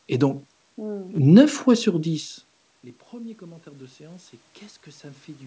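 Automatic gain rising affects this speech recording from 3.1 s to the end. The input level fell by about 23 dB, so the gain control steadily boosted its gain. Voice and room noise swell together over the final two seconds, after the talker's movement near 2 s.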